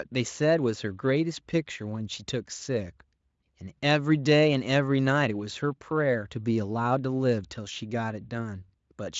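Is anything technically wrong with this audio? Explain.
No, nothing technically wrong here.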